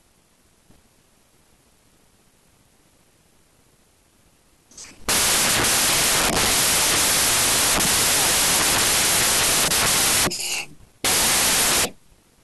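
From start to finish the speech sits under loud, harsh noise, running 1.5 times too fast and pitched up to match: a wrong sample width. Sixteen-bit samples appear to be read as packed 24-bit ones, so each value straddles mismatched bytes and only fragments of the real waveform survive. The speedup separates it from a byte-order swap, which keeps timing intact, and the noise separates it from a plain sample-rate error, which stays clean.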